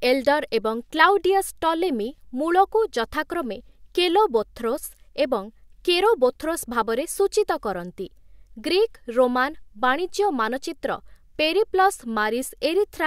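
There are no technical faults to describe in time order.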